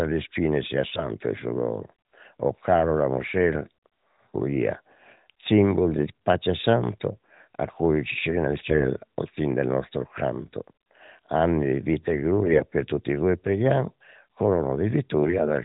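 AMR bit errors hit this speech recording three times: 0.90–1.07 s, right after "le spine sia"; 5.88–6.06 s, just before "pace santo"; and 8.70–8.87 s, just before "al fin del nostro". In each burst the less protected bits of a few AMR-NB frames arrive corrupted. Pitch and loudness hold roughly steady, but the misplaced excitation pulses and skewed fine parameters make the voice briefly hoarse and gargly. The damage is harshest in the first burst, where the error rate is highest. The narrowband codec underneath, whose light coloration points to the 12.2 kbps mode, caps everything at 4 kHz.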